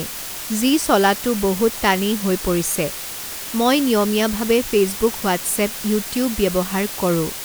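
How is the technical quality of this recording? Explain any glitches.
Technical quality is poor, because one fault runs through the whole recording.

Low bit depth with dither runs from start to finish. The level is stored with very few steps, a resolution that fits about 5 bits, and random dither is mixed in before each sample is rounded. That turns what would be gritty rounding distortion into steady, even white hiss. Here the hiss sits only about 10 dB below the speech, so it stays loud and constant behind every syllable and in every pause, without any crackle or harshness.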